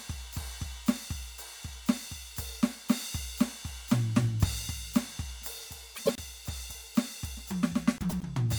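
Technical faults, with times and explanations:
5.95–6.20 s and 7.98–8.24 s, frames out of order: the music turns into a garbled flutter, because two adjacent 104.5 ms blocks play swapped.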